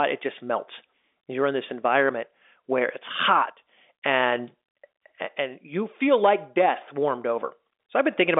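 No technical faults occur anywhere in this speech clip, which comes through an ordinary telephone line with nothing above about 3.7 kHz.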